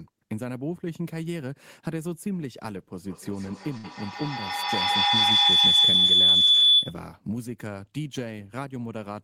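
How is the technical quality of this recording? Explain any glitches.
Two faults overlap here. From 2.99 to 7.07 s, a feedback howl: a microphone-to-loudspeaker loop gains on each pass, building a tone near 3 kHz, with the loop repeating roughly every 150 ms, peaking about 12 dB above speech. From 3.77 to 3.85 s, a burst of packet loss: the receiver extends the last sound for 63 ms, fading it, then jumps ahead past 60 ms of lost audio.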